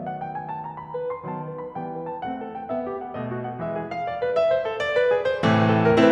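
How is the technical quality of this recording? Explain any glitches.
The technical quality of this music recording is sound, with no glitches to explain.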